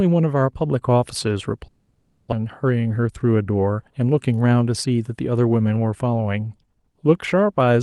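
From 1.67 to 2.34 s the speech smears into a fading buzz, then cuts out and resumes with a stretch missing, likely a long network dropout.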